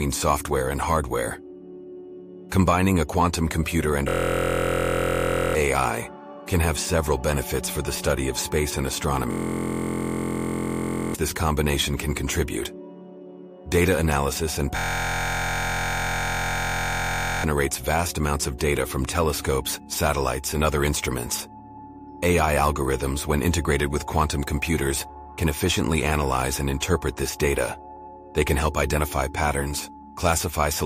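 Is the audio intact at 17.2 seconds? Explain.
No. At 17.2 s the audio is a steady buzz near 43.1 Hz, part of a system hang loop from 14.77 to 17.44 s. The system froze while the hardware replayed one 23.22 ms chunk, which fits a 1024-sample buffer, so about three seconds of audio are missing.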